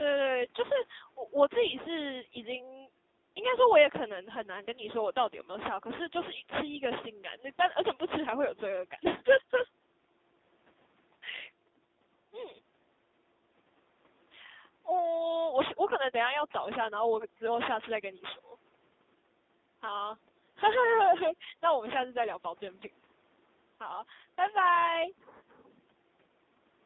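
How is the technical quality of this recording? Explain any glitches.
Quality is poor throughout the recording. The speech has passed through a narrowband mobile codec at a low bitrate.

AMR narrowband mobile codec, whole clip: the band runs from about 200 Hz to 3.7 kHz. The speech is rebuilt from a vocal-tract model and sparse pulses, and the heavy damage, which fits a rate near 5.9 kbps, makes the voice buzzy and synthetic. The call's microphone high-pass is the normal kind.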